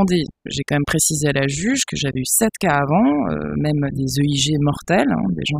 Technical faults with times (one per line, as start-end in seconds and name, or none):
0.00-5.60 overdone noise removal